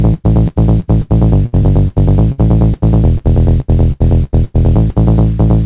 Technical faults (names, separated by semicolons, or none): repeated packet loss (robotic sound)